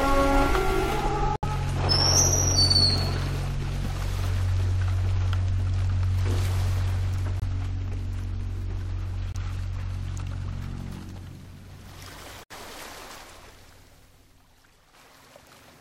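Abrupt holes of silence cut into the sound at 1.36 s (about 90 ms), 7.40 s and 9.32 s (about 30 ms each), and 12.42 s (about 120 ms), each starting hard, with the audio resuming on schedule. This is corrupt frame muting: flipped bits damaged compressed frames, the decoder rejected them, and the player substituted silence for each discarded frame. The lengths of the gaps point to runs of one or several lost frames, while timing stays intact.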